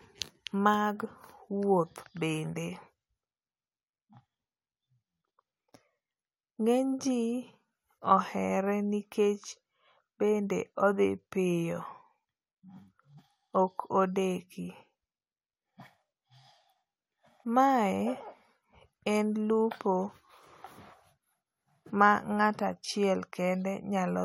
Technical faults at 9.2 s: none

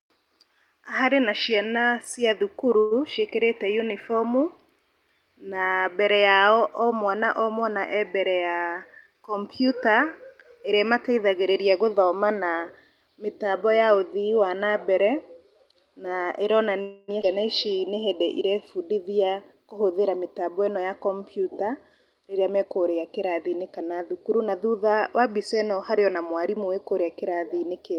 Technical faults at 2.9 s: call audio freeze

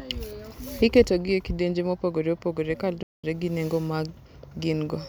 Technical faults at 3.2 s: playback stall

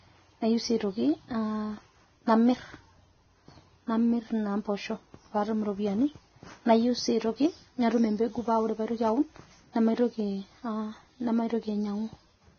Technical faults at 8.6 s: Vorbis compression

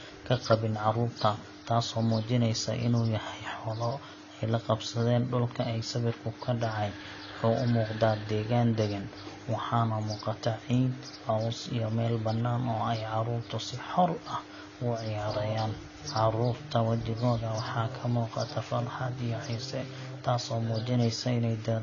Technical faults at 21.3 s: AAC compression

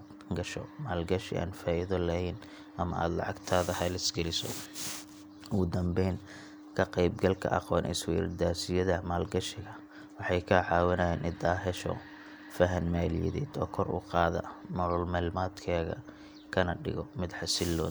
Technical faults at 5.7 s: none

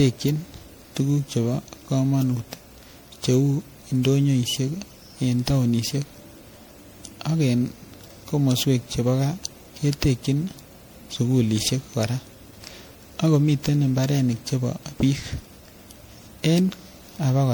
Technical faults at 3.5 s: generation loss

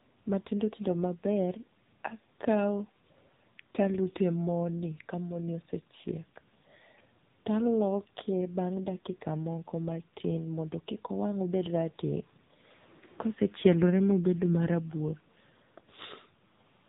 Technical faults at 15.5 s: AMR narrowband mobile codec

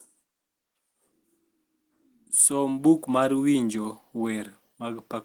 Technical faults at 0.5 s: none

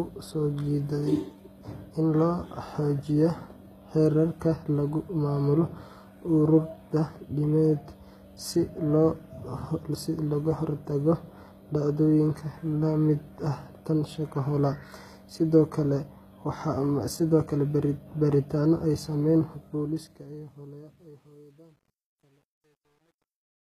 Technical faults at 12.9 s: HE-AAC compression

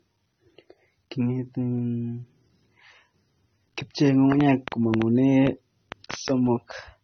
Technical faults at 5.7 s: transcoding between lossy codecs; train of clicks

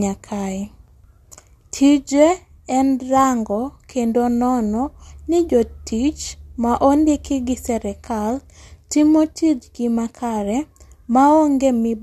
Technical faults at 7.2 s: none

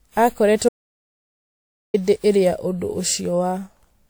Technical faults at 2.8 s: generation loss

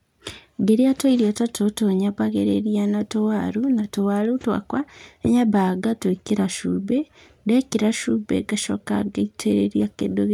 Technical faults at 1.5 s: sample clock jitter

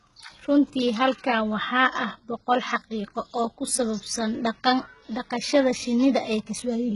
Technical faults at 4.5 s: HE-AAC compression

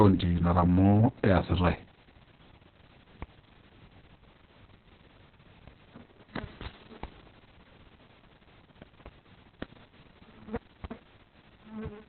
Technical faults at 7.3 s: Opus voice compression

